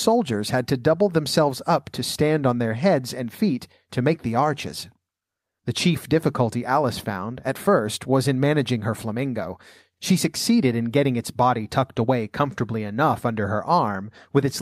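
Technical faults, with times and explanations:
Nothing stood out on listening to this speech recording.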